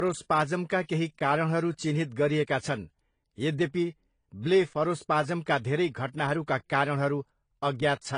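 Transcoding between lossy codecs is heard throughout: nothing above 10.1 kHz remains, and two layers of compression artefacts sit together on the speech. The likely cause is a low-bitrate AAC-LC encode re-encoded as Vorbis, which spent its bits on the earlier damage.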